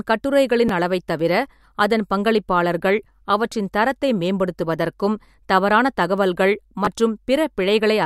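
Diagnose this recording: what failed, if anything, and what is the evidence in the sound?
Looks like a driver or buffer stage problem: a repeated buffer, twice. At 0.68 s, right before "அளவைத் தவிர அதன் பங்களிப்பாளர்கள்", a tiny slice of speech plays one extra time with a hard join, so you get a quick click. At 6.85 to 6.87 s the same slice goes round twice more, which comes across as a brief buzz. Each repeat is about 10.7 ms, which fits a 512-sample buffer. Fresh audio didn't arrive in time, so the device just replayed the last block.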